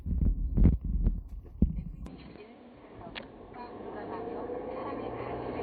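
Throughout the clip the sound carries plainly audible codec damage, a watery, swirly texture with smeared attacks, most likely from MP3 compression at a low bitrate, around 64 kbps. Starved of bits, the encoder drops weak frequency lines that flicker between frames.

At 2.07 s the tone abruptly turns dull and narrow, with nothing above 4.4 kHz from there to the end, with no gap at the change and no obvious level jump. A faint new noise floor sits well below the signal. This points to an input switched to a poorer device.

From 3.52 to 3.56 s a short glitch breaks through. This comes from damaged data in the compressed stream. The decoder misreads corrupted frames, loses sync and skips ahead to the next valid frame header.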